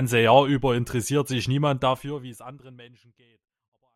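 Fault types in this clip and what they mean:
No technical faults are audible in this speech recording.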